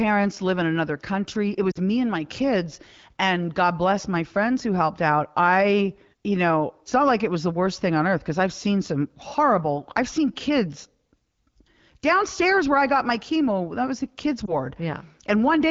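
At 1.72 to 1.79 s, just before "me and my kids", lost AMR speech frames occur: corrupted radio frames fail their checks, and the wideband decoder fills the gap by repeating its last good pitch and vocal tract settings at lowered gain. The sound there sinks briefly, about 40 ms, which fits two missing frames. A second loss at 14.45 to 14.57 s, after "was the kids'", fits a single frame and gives a brief dip or warble.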